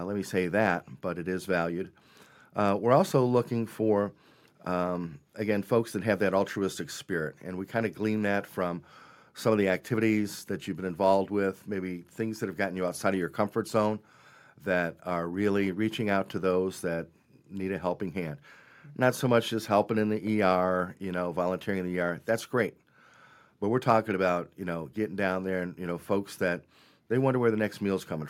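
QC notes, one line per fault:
No faults heard anywhere in this speech recording.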